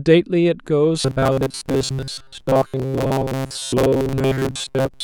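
From 1.01 s to 5.03 s the speech turns into a metallic 134 Hz buzz loosely tracking the words. This is robotic sound from repeated short buffers: audio likely arrived too seldom, so a 7.5 ms slice kept repeating in place of most real audio.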